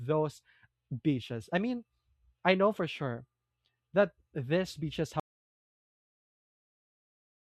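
Audio dropout to silence at 5.20 s, right after "that these beaches": the speech cuts off into silence with no room tone to the end, likely from lost input.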